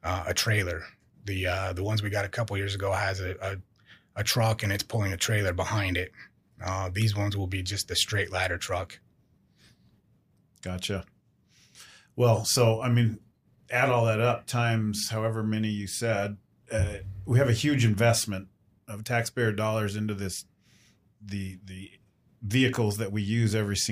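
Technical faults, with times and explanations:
No technical faults can be heard in this speech clip.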